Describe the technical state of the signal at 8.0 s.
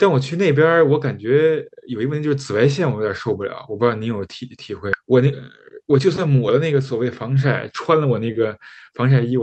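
At 8.0 s the signal is inside a jitter buffer speed-up that runs from 7.93 to 8.45 s. The receiver's buffer had built up more audio than its target, so it repeatedly cut out short pitch-period-length segments, trimming around 50 ms in total. Playback runs at about 108% of normal speed with unchanged pitch, so the speech sounds rushed. The Opus call path keeps content below 8 kHz throughout.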